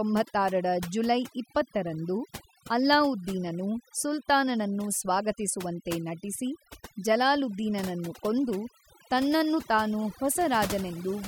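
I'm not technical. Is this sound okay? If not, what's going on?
No, not quite. Throughout the whole clip there's overdone noise removal: a cleanup tool was pushed too hard, so the gaps between speech drop away and break up into little twinkly specks.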